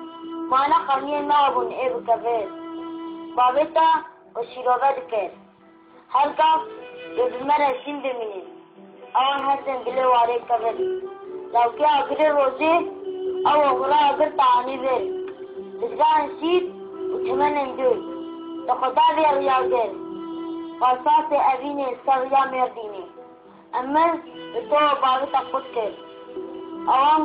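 From 7.70 to 9.39 s the sound abruptly turns dull and boxy, with nothing above 3.5 kHz, a faint new background hiss and no gap or level jump, then clears again. The likely cause is an input switched to a poorer device.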